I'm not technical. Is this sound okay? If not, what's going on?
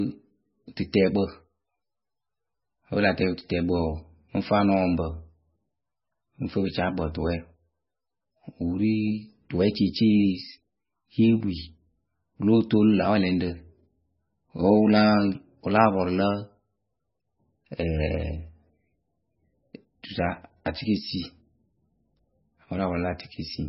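No. MP3 compression, throughout: the speech sounds watery and muffled, with nothing above 5.6 kHz, likely from squeezing the file so hard that fine detail was discarded.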